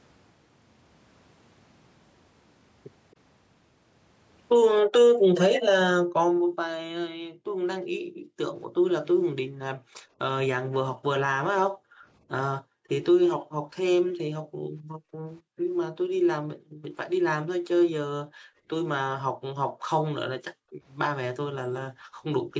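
At 3.11 to 3.16 s a very faint, brief delayed copy of the speech surfaces, trailing the original by about 269 ms. This is most likely an echo leak: the far side's echo canceller let some of its loudspeaker pickup slip back. The fixed lag separates it from room reverberation.

From 4.81 to 8.38 s, 9.42 to 10.19 s, 11.65 to 16.84 s, 18.24 to 20.83 s and 21.9 to 22.54 s, the background is gated by the echo canceller. The room tone dips by up to about 40 dB, adding up to roughly a second or more in the longer stretches, whenever the canceller clamps the microphone, then returns. Only the background drops, so these are gating dips rather than signal dropouts.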